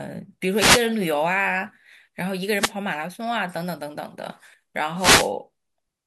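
Wireless microphone noise hits occur at 0.53 to 0.87 s, 2.55 to 2.73 s and 4.96 to 5.32 s. Each is a brief swish of static over the speech. The analogue FM radio link fades when reflected copies of the signal arrive out of phase and cancel. With the carrier weakened, the receiver's own noise rises and partly masks the voice. The second burst is the shortest, under 0.2 s, while the others last about a third of a second.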